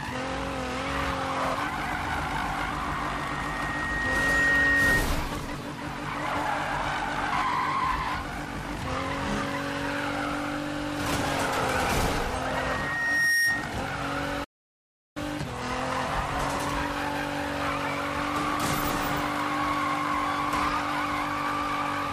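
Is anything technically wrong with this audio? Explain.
Yes, there are two faults.

From 12.47 to 13.77 s, a loudspeaker feedback squeal: the microphone re-amplifies its own loudspeaker, so a 1.9 kHz tone swells over about a second to about 5 dB above the sound, a bright horizontal spectrogram line.

From 14.44 to 15.17 s, a playback stall: the audio drops to silence for about 0.72 s, a flat waveform gap, likely from the player running out of data.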